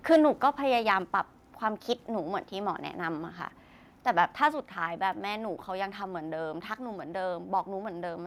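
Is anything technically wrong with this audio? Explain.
Yes, there are two faults. From 0.11 to 0.17 s, microphone overload: the input level was likely set too high, pushing peaks about 4 dB past the converter's limit and flattening roughly 7 percent of samples, giving a harsh, crackly edge. At 1.02 s, microphone volume stepped down: the software likely cut the input gain in one step, so everything drops suddenly by about 2 dB.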